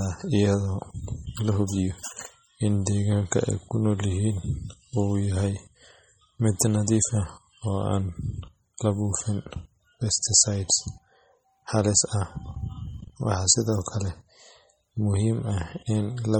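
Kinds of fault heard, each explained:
MP3 compression: heavy watery, swirly smearing throughout the speech, nothing above 19.3 kHz. Likely a starved MP3 encode, fitting something like 32 kbps.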